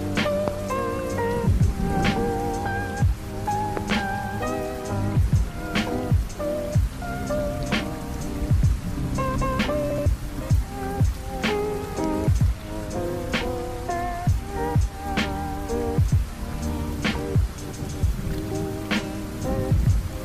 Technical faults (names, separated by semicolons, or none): loud pop